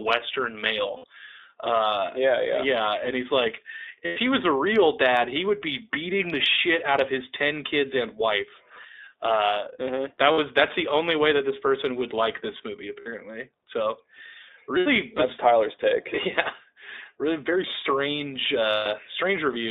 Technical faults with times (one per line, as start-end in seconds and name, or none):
0.00-19.71 iLBC codec
0.96-1.04 lost iLBC frames
4.06-4.17 lost iLBC frames
10.32-10.39 lost iLBC frames
13.00-13.07 lost iLBC frames
14.78-14.88 lost iLBC frames
18.72-18.87 lost iLBC frames